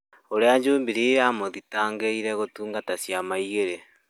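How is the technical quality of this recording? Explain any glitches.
No glitches or defects show up anywhere in this recording, so its technical quality is sound throughout.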